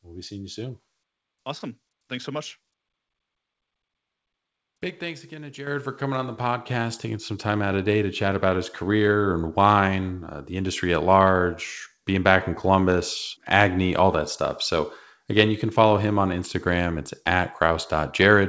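A speech recording in which the microphone volume is stepped up at 5.67 s: voice and background noise jump together by about 8 dB in one instant, unlike a gradual gain ride or a speaker simply talking louder. Throughout, nothing above 8 kHz is heard, which fits a wideband call codec such as G.722.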